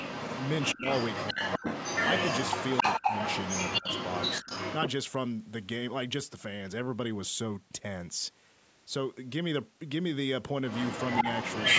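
Speech, in which a far-end echo canceller likely failed to remove its loudspeaker pickup, so an echo leak sends back a copy of the voice delayed by 272 ms, about as loud as the speech from 0 to 4.77 s and somewhat louder from 10.67 s to the end. While both sides talk at once, the canceller likely mistakes the talker for echo, and speech suppressed in double talk makes the voice dip sharply in brief dropouts at 0.74, 1.32, 1.59, 2.99 and 3.80 s.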